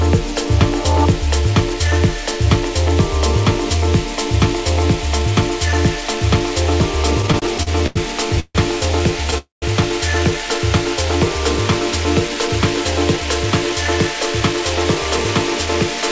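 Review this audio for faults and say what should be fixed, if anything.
The sound stalls in repeated stutters between 7.22 and 7.97 s: seven short gaps, the longest 88 ms, adding up to about 195 ms and covering roughly a quarter of that span. Packets kept arriving later or slower than playback, so the jitter buffer drained again and again and the receiver extended the last sound each time. Nothing is lost, but the audio drags in a broken rhythm. What separates it from a freeze is the run of many brief gaps in quick succession rather than one longer hold. Giving the jitter buffer more headroom, or smoothing packet pacing on the sending side, would prevent it.

There are two call audio freezes: 8.40 to 8.57 s, about 149 ms with the last 50 ms silent, and 9.38 to 9.64 s, about 241 ms with 150 ms of silence. In each one the last sound is held as a buzzy continuation that fades into silence, and the audio then resumes where it stopped, so a gap is inserted without anything being skipped. 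The likely cause is packets held up in transit until the jitter buffer emptied, and the timeline shifted later by the same amounts. Unlike the stutter, each is a single long hold that ends in silence. A larger adaptive buffer target, or fixing the network delay spikes, would prevent these freezes.

There is a jitter buffer speed-up from 12.34 to 16.03 s. Playback runs at about 105% with the pitch unchanged, because the receiver cut many short pitch-period slices, about a fifth of a second in total, to shed the backlog that built up after the delayed packets. It sounds slightly hurried rather than broken, and that steady rushing is what distinguishes it from the stalls. A gentler or slower drain policy in the buffer would prevent it.

All of this passes through a call path in which nothing is audible above 8 kHz, which fits wideband G.722.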